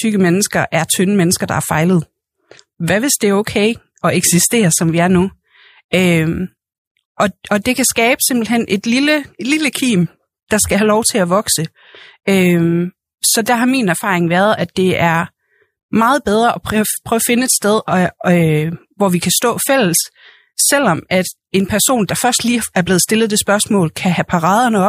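No technical faults can be heard anywhere in this speech recording. Nothing in it needs a timestamp or a closer look.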